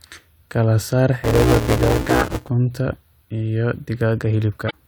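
From 1.24 to 2.49 s there's buffer tearing: a robotic buzz at about 188 Hz, where writer and reader slipped so each period carries audio from roughly 10 ms back, which fits a 256-sample buffer. Then at 4.66 to 4.73 s, damaged data in a compressed stream makes the decoder lose sync and search for the next frame header.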